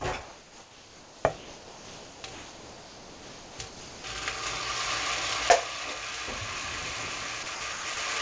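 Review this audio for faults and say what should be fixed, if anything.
The sender's voice detector likely treated this sound as background and stopped transmitting, so the receiver filled the gaps with comfort noise. This is sound dropped by the voice detector: the sound gives way to steady noise from 0.23 to 1.25 s, 1.37 to 2.24 s, 2.33 to 3.59 s and 3.68 to 4.04 s, then in brief dropouts at 7.43, 7.55 to 7.61, 7.73 to 7.85 and 7.94 s. The G.722 call path removes everything above 8 kHz. Disable or retune voice activity detection for non-speech audio.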